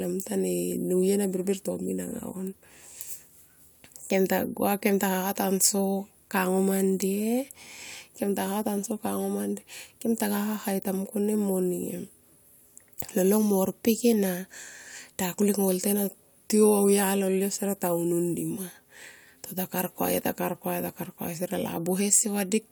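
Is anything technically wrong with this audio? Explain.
No, nothing technically wrong stood out on listening to this speech recording.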